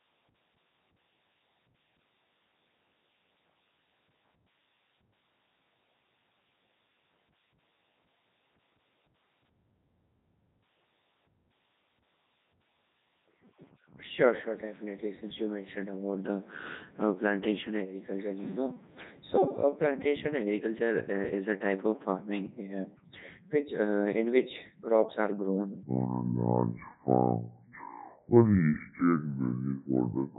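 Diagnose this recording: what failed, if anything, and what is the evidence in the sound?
Throughout, the speech is robotic and buzzy, with heavy codec damage. This is the Codec 2 vocoder at the codec stage, with damage that fits its 3.2 kbit/s mode. Only pitch, voicing, energy and a spectral envelope are sent, and the decoder rebuilds the voice from sine waves.

From 25.83 s to the end, the section at the wrong speed plays at 0.61 times normal, so the speech turns slow and deep, roughly ten semitones lower. Speed and pitch drop together, most likely because playback or an edit used the wrong clock.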